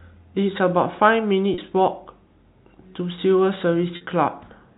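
At 1.54–1.58 s and 3.96–4.01 s, packet loss with pitch repetition bridges 40 and 50 ms gaps with a repeated pitch period, heard as a brief buzzy hold and seen as identical periodic cycles fading in the waveform.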